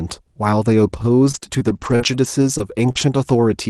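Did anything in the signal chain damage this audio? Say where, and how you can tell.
Yes. Repeated packet loss (robotic sound) between 1.25 and 3.03 s: six short gaps, the longest 43 ms, each patched by stretching the last sound, giving a choppy robotic network fault.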